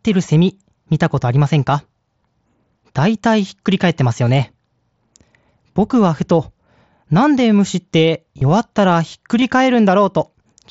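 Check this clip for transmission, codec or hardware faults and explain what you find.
There's one fault: concealed Bluetooth headset packet loss, at 1.41, 4.28, 8.38 to 8.41 and 9.41 s. The mSBC headset codec's wideband sound comes through with light codec damage.

When a packet drops, the receiver patches the gap by repeating the best-matching recent stretch. The single blips barely register. The roughly 30 ms run at 8.38 s, which points to four lost frames, gives a short buzzy tone and then a small warble.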